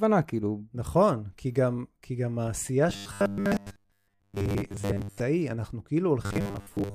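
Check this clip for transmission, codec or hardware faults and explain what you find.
Robotic sound from repeated short buffers, twice: 2.90–5.20 s and 6.24–6.95 s. A rigid 100 Hz metallic buzz, likely from a roughly 10 ms chunk replayed in place of most incoming audio, shows as evenly spaced harmonics and a repeating waveform.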